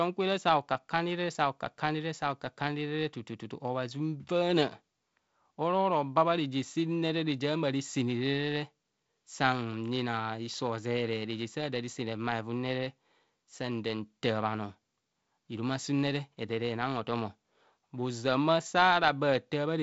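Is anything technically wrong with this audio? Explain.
No, nothing is technically wrong with this audio.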